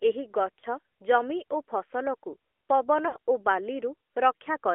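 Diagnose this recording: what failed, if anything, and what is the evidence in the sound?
Codec stage: the whole clip is squeezed into a 300 Hz to 3.4 kHz phone band with clearly buzzy, synthetic speech. That's the AMR narrowband mobile codec, at a rate that sounds like about 10.2 kbps.

Network/radio stage: lost AMR speech frames. There's a short warbly dip at 0.60–0.64 s, then a longer smeared fade at 3.08–3.18 s. The decoder is repeating its last pitch and vocal-tract settings at falling gain. The second one sounds like about three 20 ms frames gone.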